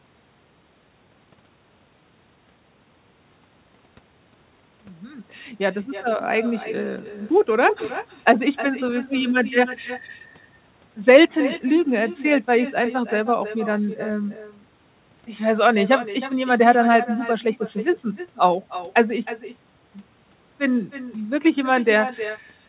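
Echo with no canceller runs through the whole recording. The far end is playing the call out of a loudspeaker, its microphone picks that playback up, and nothing strips it out before it is sent back, so every phrase returns roughly a third of a second later at about 14 dB below the speech. The returning copy sounds thinner, trailing each utterance. The narrowband sound, with nothing above 4 kHz, fits a G.711 A-law call path.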